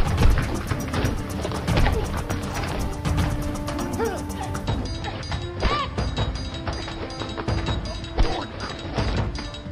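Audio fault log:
No faults detected in this recording.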